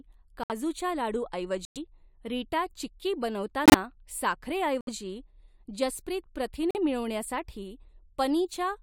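Abrupt silent gaps cut into the speech at 0.44–0.52 s, 1.65–1.77 s, 3.66–3.74 s, 4.81–4.89 s and 6.71–6.77 s, each 60 to 120 ms long, with timing kept. This is corrupt frame muting: the decoder rejected damaged compressed frames, and the player substituted silence for them.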